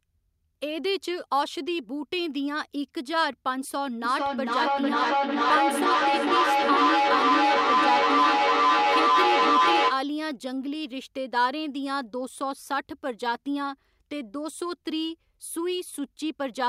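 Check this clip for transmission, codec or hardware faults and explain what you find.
One fault is present: feedback echo between two devices, from 4.04 s to 10.11 s. The speech returns at a steady interval of about half a second. The repeats grow rather than fade, peaking at about 6 dB above the speech itself. Two devices on the same call share a room: one plays the other's audio, and that microphone captures it again. Each echo canceller only removes its own device's playback, so the loop sustains and builds.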